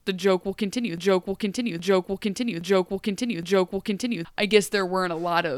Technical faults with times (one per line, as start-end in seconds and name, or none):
0.98-4.25 broken-record loop